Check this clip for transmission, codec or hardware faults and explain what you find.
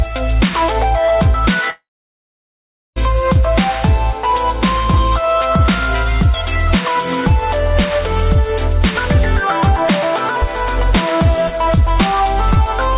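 One transmission fault is audible: a long network dropout.

From 1.7 s to 2.98 s the audio breaks off. The receiver is likely covering a gap in arriving audio. It stretches the last sound into a brief fading buzz or hiss. Then about 1.13 s of near silence follows. Roughly 1.26 s of material never plays. The sound resumes at 2.98 s with that stretch missing. Throughout, nothing is heard above 4 kHz, as expected from a G.711 call codec.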